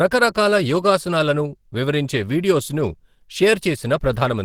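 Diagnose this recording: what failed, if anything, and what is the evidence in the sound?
Codec stage: the speech is hoarse and grainy throughout, with a noisy, filled-in top end. This is likely Opus compression in hybrid mode, fitting a 16 kbps rate.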